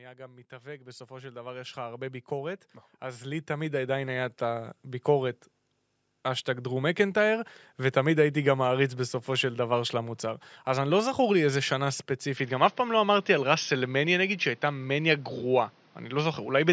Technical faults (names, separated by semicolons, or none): automatic gain rising; input switched to a poorer device